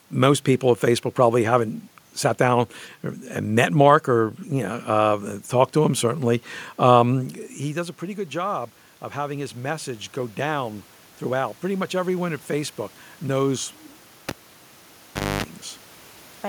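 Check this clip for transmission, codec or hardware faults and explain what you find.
Two faults are audible: automatic gain rising and a cable pulled and plugged in.

From 7.13 to 10.8 s the automatic gain control climbs. Around 7 s the talker moves away, and the input drops about 16 dB. The control responds by raising its gain about 6 dB over nearly four seconds, so voice and room noise swell together.

From 14.29 to 15.44 s a live cable is pulled and reinserted. A pop is followed by about 1.1 s of near silence. Within it comes a 258 ms burst of 50 Hz mains buzz while only the plug tip makes contact, and then a second pop as the signal returns.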